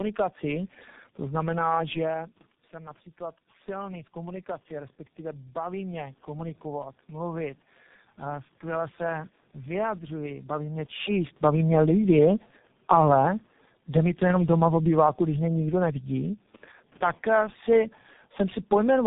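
Tandem speech coding runs the whole way through: the speech sounds like it went through three low-rate speech coders in a row, likely ending at something like G.723.1. Each one re-codes the last one's damage, so it's rough, warbly and muffled, with nothing above 3.8 kHz.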